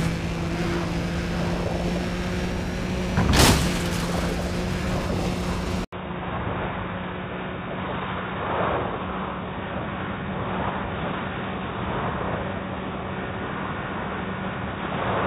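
At 5.85 s there's a short gap of about 80 ms, and from there to the end the sound changes character. Nothing comes through above about 3.8 kHz, so it turns dull and boxy. It drops a few dB in level, and a new background noise floor sits about 30 dB beneath it. That pattern of a brief dropout and then a narrower, noisier, quieter pickup is most likely the input switched to a poorer device, such as a different mic or a headset's call profile.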